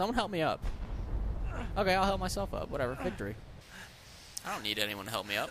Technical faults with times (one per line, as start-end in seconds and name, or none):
3.61-5.51 pre-emphasis left on